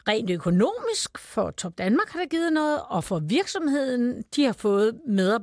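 No technical fault can be heard anywhere in the recording; the speech signal stays steady throughout, with nothing that interrupts or disturbs it.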